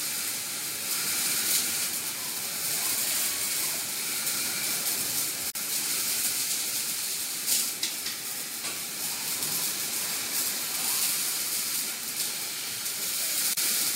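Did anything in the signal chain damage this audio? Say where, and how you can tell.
Yes, at the codec stage: two gaps at a join of encoded pieces, from 5.50 to 5.55 s (48 ms) and from 13.54 to 13.57 s (36 ms). Each separately encoded piece kept its leading encoder delay and padded final frame, so short silences with smeared edges open in continuous sound. Unlike a network dropout, nothing is lost or concealed; the sound resumes exactly where it stopped.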